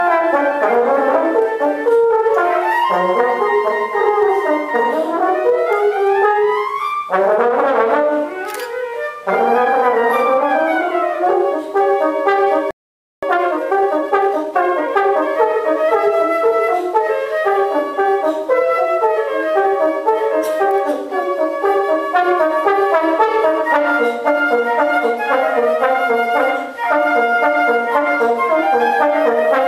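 The audio stops dead at 12.71 s and stays silent until 13.23 s, a playback stall of about 0.52 s, most likely the player running dry of buffered data or having its output thread blocked. On a waveform this is a flat silent gap with hard edges cut mid-signal; a spectrogram shows a clean vertical band of empty columns across all frequencies, with no decay tail. From 13.23 s to 15.29 s comes time-compressed catch-up: the player drains its backlog by removing short slices and cross-fading the joins, so the sound runs 1.25 times fast while pitch stays put. A spectrogram keeps harmonics at their normal heights but squeezes events closer together in time, and small smeared seams appear where segments were spliced.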